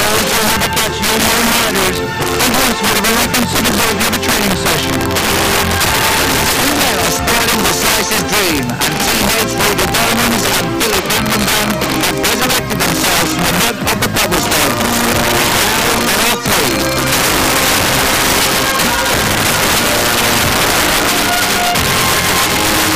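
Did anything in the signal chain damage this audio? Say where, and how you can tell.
Yes. Integer overflow runs through the whole clip at the fixed-point gain or sample-format conversion stage. With the level pushed about 10 dB too hot, a small share of samples, several percent, wrap to the opposite sign instead of limiting, producing violent cracks on loud peaks, far harsher than clipping.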